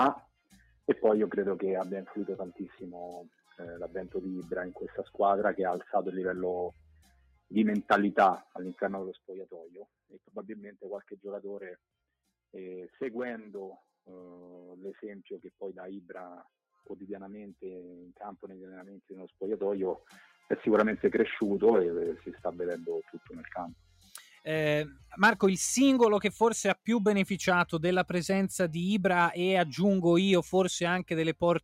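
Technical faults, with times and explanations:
0.2 to 10.36 s, sound cut by the noise suppressor: four dips, at 0.2 to 0.87 s, 3.24 to 3.55 s, 6.73 to 7.51 s and 10.09 to 10.36 s, where the suppressor mistook wanted sound for noise and pulled it down by about 19, 12, 18 and 12 dB. Each lasts well under a second. The waveform shows the envelope abruptly thinning, and on a spectrogram the steady parts and decaying tails fade out while sharp onsets remain visible.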